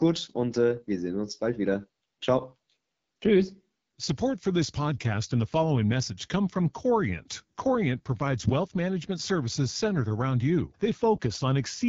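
From start to finish the speech carries AMR wideband (HD Voice) codec damage, and it's plainly audible: a rough, raspy edge, which points to one of the codec's lowest rates, around 8.85 kbit/s. Nothing comes through above about 7.4 kHz, and the top band sounds like thin, shaped noise.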